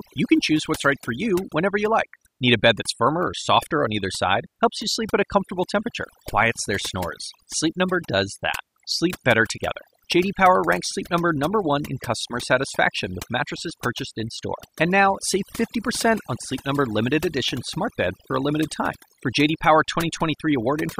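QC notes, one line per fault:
Throughout: overdone noise removal. The noise reduction on this speech was pushed too hard. Every frequency band that sat close to the estimated noise floor was cut right down or removed, and the quieter parts of the voice were taken out along with the noise. The background drops to near silence with small twinkling specks in it. On a spectrogram the floor looks like scattered isolated blips, and the harmonics have holes in them. On the waveform the pauses are almost flat.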